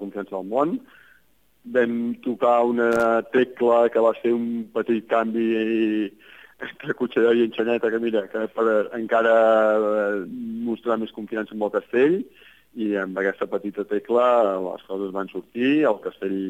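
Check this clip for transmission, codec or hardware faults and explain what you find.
There's one hardware fault here: loose connector crackle from 2.92 to 3.05 s. A worn or dirty contact is making and breaking for about 130 ms, so the signal gets chopped and any DC on the line pops, giving a short, irregular burst of scratchy crackle.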